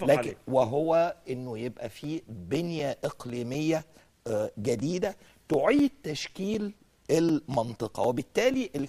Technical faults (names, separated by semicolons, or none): periodic USB or driver dropouts